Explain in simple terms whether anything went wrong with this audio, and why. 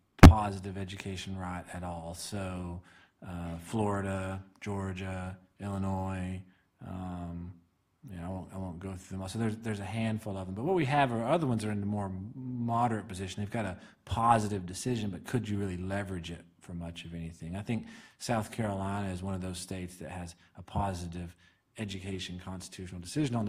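Nothing went wrong; no faults can be heard here.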